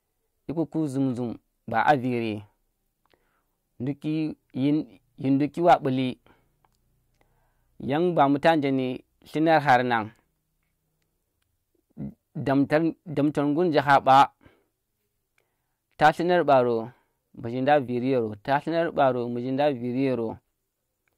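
Brief crackles and harsh fuzz hit the loudest peaks at 1.88–1.91, 5.69–5.74, 8.21–8.50 s after "yan ba", 9.54–9.75, 13.78–14.23 s after "damtar ngur nje", 16.03–16.09 and 16.52 s. This is hard clipping: peaks overdrive a stage by about 1 to 6 dB and are cut flat, adding high harmonics.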